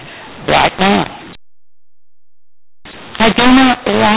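From start to finish the speech has a mu-law and A-law mix-up: it was encoded as mu-law but decoded as A-law. That scrambles the levels, so it sounds harsh and gritty, and the pauses fill with hiss. The band stops near 4 kHz, which fits ordinary 8 kHz telephone coding.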